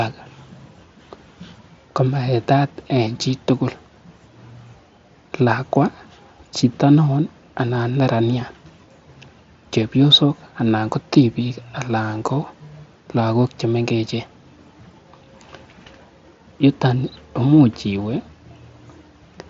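No technical faults can be heard in this speech.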